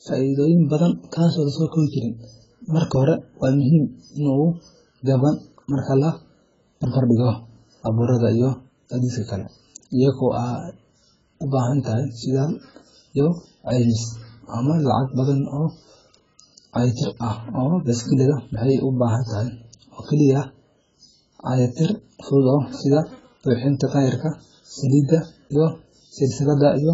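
From start to finish the speech sounds dull and smeared. Nothing is heard above 7.6 kHz. Sibilants turn fizzy and sustained sounds warble. The damage is heavy. This points to likely AAC compression at a very low bitrate, around 12 kbps, discarding and coarsely quantising spectral detail.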